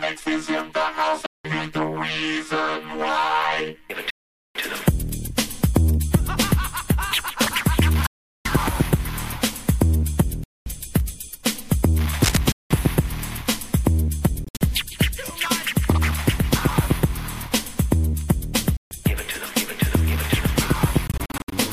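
Silent holes open at 1.26, 4.10, 8.06 and 10.44 s, lasting roughly 0.18 to 0.45 s. The sound cuts off sharply and picks up further along, as if it kept playing underneath. That's a Bluetooth dropout, likely from packets arriving too late.

At 12.20 s there's a brief burst of cable scratch noise, about as loud as the sound itself. It's a rough, rustling crackle that fits a worn connector or cable being moved.

More dropouts follow at 12.52, 14.44, 18.77 and 21.07 s. The ones at 14.44 and 21.07 s break up into stutters rather than a single clean gap.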